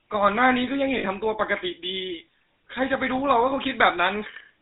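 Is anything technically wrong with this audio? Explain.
Yes, two things. The whole clip has gone through the GSM full-rate codec, the sort you'd get at about 13 kbps. It models the vocal tract and feeds it a sparse, evenly spaced pulse train, and nothing above 4 kHz survives. You can plainly hear the buzzy, gravelly roughness on the speech.

Then from 0.98 to 1.06 s there are lost GSM frames. About 60 ms went missing, which fits three dropped 20 ms frames. The decoder papered over the gap by repeating the last good frame, so you get a brief rough, metallic ring.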